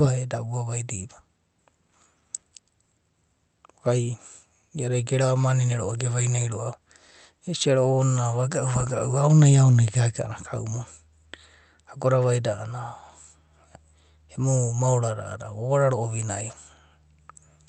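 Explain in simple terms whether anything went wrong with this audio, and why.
Nothing went wrong; no faults can be heard here.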